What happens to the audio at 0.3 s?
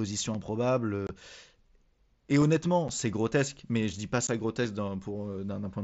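A block of digital silence hits at 0.34 s: for about 5.8 ms the speech drops straight to silence and then resumes, with no fade on either side. A gap that short is consistent with the playback path failing to fill one output buffer in time, and its length fits a 256-sample buffer. Because the gap is so short, it is heard as a tick or dip rather than an audible hole in the speech.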